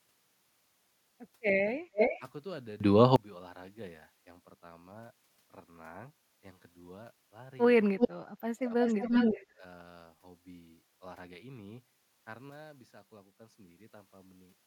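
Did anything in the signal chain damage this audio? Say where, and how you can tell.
Yes. In call processing, the far end's echo canceller likely let loudspeaker pickup through, producing an echo leak. A delayed copy of the speech returns at 1.93 to 2.2 s, 7.98 to 8.09 s and 8.84 to 9.45 s, lagging about 320 to 350 ms, from a few dB below the speech to level with it.

Also in call processing, speech was suppressed in double talk between 8.45 and 8.72 s. While both ends were active, the canceller likely mistook the talker for echo and attenuated it. For roughly 150 ms in total the speech drops by up to about 30 dB.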